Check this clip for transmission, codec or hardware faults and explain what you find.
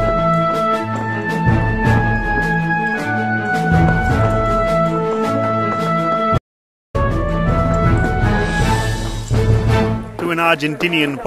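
One fault: an audio dropout to silence from 6.38 to 6.94 s, where sound cuts out mid-flow for about 0.56 s, likely because input was lost through disconnection, link failure or muting. No room tone remains; the waveform flattens and the spectrogram shows a blank vertical band.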